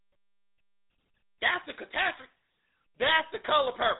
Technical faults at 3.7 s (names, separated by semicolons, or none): GSM full-rate codec